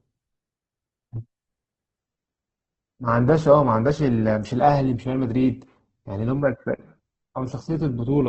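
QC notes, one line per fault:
1.98 to 8.28 s: adaptive stream at a lower bitrate. The speech switches suddenly, with no gap, to a dull version. Nothing above 8.1 kHz remains and codec artefacts rise. This fits Opus dropping from around 64 kbit/s to 12 kbit/s.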